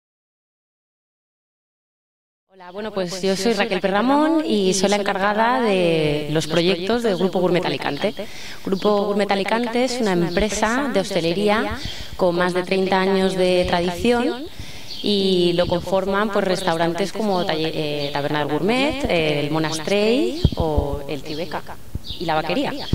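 Throughout, there's a doubled audio track: a dry, full-band copy trails about 150 ms behind at roughly 10 dB down, likely from a slower second capture path.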